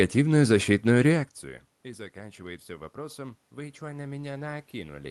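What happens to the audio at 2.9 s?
At 2.9 s the automatic gain control is partway through raising its gain. The input fell by about 21 dB, and from 1.82 s, just after "защитную реакцию", the control starts compensating, climbing gradually until the clip ends at 5.1 s. The voice and the room noise behind it swell together at 2.9 s, so the background grows along with the speech instead of the speech returning alone, as it would if the talker simply came closer.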